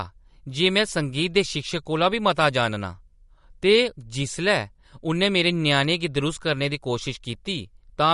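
From start to finish the speech sounds watery and swirly, with nothing above 11.2 kHz. Likely MP3 compression starved of bits, fitting roughly 48 kbps.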